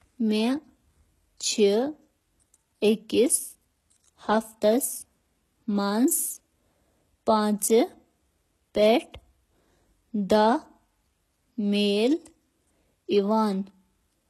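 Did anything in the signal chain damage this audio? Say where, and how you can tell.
Yes, at the codec: the speech sounds like likely HE-AAC compression throughout, with s sounds gritty and metallic, treble rebuilt from copied lower bands, nothing above 12.3 kHz, fitting roughly 16 kbps.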